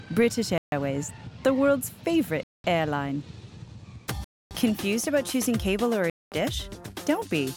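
At 0.58 s, 2.43 s, 4.24 s and 6.10 s the sound cuts to silence for about 0.14, 0.21, 0.27 and 0.22 s, then resumes. These dropouts are likely Bluetooth stalls. Delayed packets let the headphone buffer run empty, so playback halted until they arrived.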